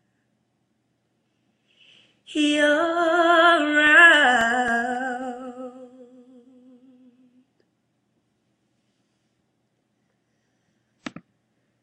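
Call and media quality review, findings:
CD scratch ticks, 3.60 to 5.22 s: seven short ticks, the longest under 2 ms, about four per second. Probable component: disc read path. A scratch defeats error correction once per revolution; the player patches or mutes the lost samples.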